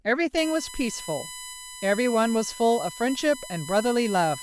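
From 0.37 s to the end, a steady, fixed-pitch whine sits under the speech, built on 1 kHz with its strongest component at 11 kHz, roughly 15 dB below the speech. This is USB whine: the bus's 1 ms frame current leaks into the audio through shared power or ground.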